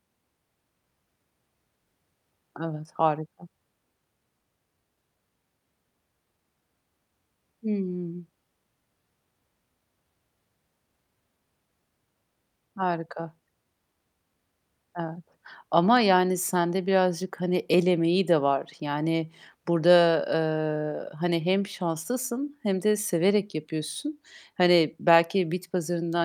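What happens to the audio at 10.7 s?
Nothing goes wrong at 10.7 s; the audio there is intact, with no dropout, click, distortion or other fault.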